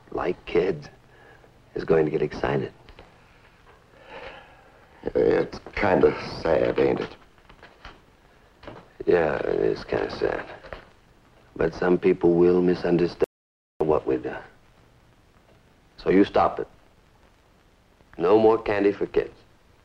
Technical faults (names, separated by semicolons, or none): audio dropout to silence